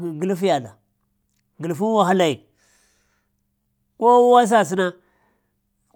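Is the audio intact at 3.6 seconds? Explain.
No. A Bluetooth stutter runs from 3.62 to 3.66 s. The receiver ran short of data for about 42 ms and replayed its last short buffer, which fits roughly three lost packets. That repeated slice gives a brief buzzing stutter before the speech resumes further on.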